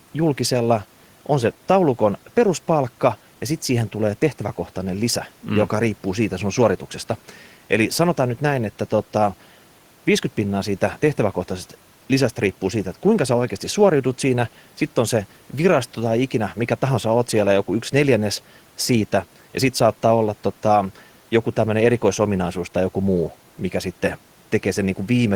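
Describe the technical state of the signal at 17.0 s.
At 17.0 s the speech signal is intact, with no audible fault at that moment.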